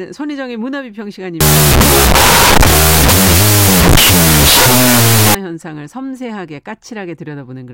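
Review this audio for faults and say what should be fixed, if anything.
From 1.41 to 5.35 s there is a wrong sample width fault. Sixteen-bit integer data is read as unsigned 8-bit. Each byte becomes its own sample, so the audio runs at half speed, an octave low, buried in loud noise. Store the sample format with the data and check it when decoding.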